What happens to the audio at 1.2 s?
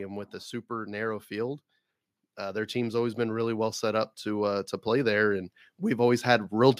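Nothing goes wrong at 1.2 s; the speech runs through that moment intact, with no dropout, click, distortion or other fault.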